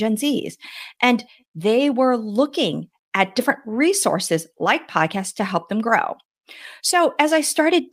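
Speech runs slightly fast and unsteady from 0.01 s to 7.87 s, with small hiccups throughout. The underlying fault is clock drift between sender and receiver. The sending device's sample clock runs roughly 4 percent fast relative to the playback side, so audio arrives a little quicker than it is consumed. The jitter buffer on the receiving end therefore keeps creeping toward overflow and has to be held in check for the whole clip.

That pressure shows up as repeated timing corrections over the same 0.01 s to 7.87 s stretch. To stay in step, the receiver keeps trimming short slices out of the stream, always dropping material rather than repeating it, so the net result is speech rendered at about 104 percent of its natural pace. The cuts land at uneven intervals and are individually tiny. They come across as faint stumbles and a slightly irregular, hurried tempo rather than distinct gaps.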